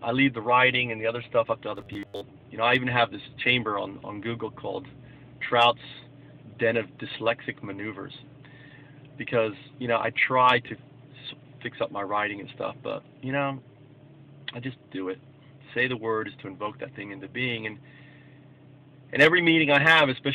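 From 1.76 to 2.21 s the sound turns into a rigid metallic buzz at 100 Hz, the robotic sound from repeated short buffers. Late-arriving audio was likely covered by looping a roughly 10 ms segment for most of that stretch. A spectrogram shows evenly spaced 100 Hz harmonics, and the waveform shows identical repeating cycles.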